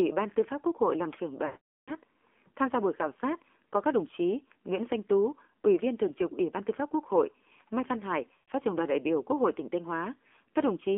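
The whole clip of speech passes through the AMR narrowband mobile codec. The band runs only from 250 Hz to 3.5 kHz, so the sound is thin and boxed in. The voice is buzzy and synthetic. The damage is plainly audible. This fits a low AMR-NB mode near 7.4 kbps. That mode models the vocal tract with very few pulses per frame.

From 1.46 to 1.92 s, just after "hội làm trưởng", lost AMR speech frames cut in. The decoder repeats the last good settings with falling gain. The sound drags and fades to silence. The gap fits a run of about 21 frames, roughly 0.42 s of lost audio. A shorter loss follows from 8.34 to 8.51 s, just before "trưởng đoàn đại biểu". It brings a brief smear and dip. The voice then returns rough.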